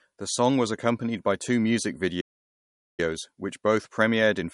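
Throughout the speech the s sounds carry a watery, swirling shimmer. That points to MP3 compression, likely at a low bitrate around 48 kbps. Weak frequency lines flicker in and out between frames, unlike the steady dullness of a plain low-pass filter.

From 2.20 s to 3.00 s, after "accompanied by two music", the sound falls silent for about 0.78 s and then resumes with "which both". This is a playback stall, likely from the player starving for data.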